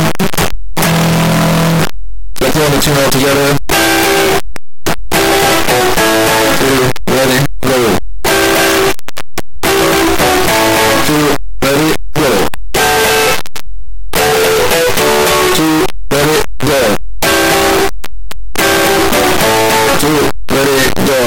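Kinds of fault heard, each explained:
Signed and unsigned mixed up: harsh, very loud distortion throughout, quiet stretches as loud as peaks, likely from 8-bit samples read with the wrong sign convention, unlike gentle 8-bit grain.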